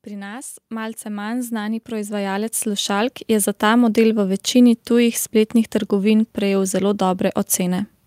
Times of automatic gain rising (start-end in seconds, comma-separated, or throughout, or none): 0.06-4.45